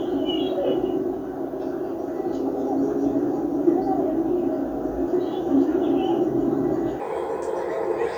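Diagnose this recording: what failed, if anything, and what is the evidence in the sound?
The last stretch, from 7.0 s to the end at 8.17 s, is a section at the wrong speed. It runs 1.28 times too fast, so everything jumps up about four semitones and hurries along together. That likely comes from an edit or playback stage applying the wrong clock to that segment.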